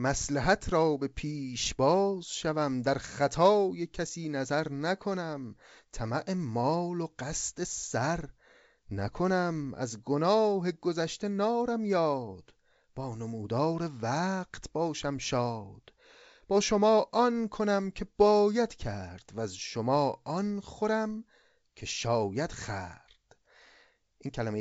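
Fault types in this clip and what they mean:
The speech is carried by G.722 wideband telephone coding at 64 kbit/s, which leaves nothing above 7.7 kHz and adds at most a faint trace of coding hiss, and no faults are present.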